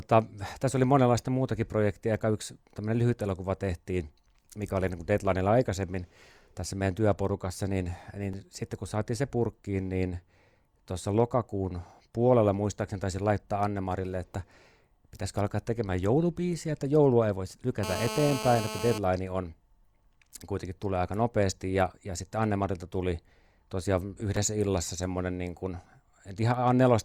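From 17.83 to 18.98 s, GSM phone buzz: a steady, raspy 217 Hz rasp about 8 dB below the speech, unlike smooth 50/60 Hz mains hum.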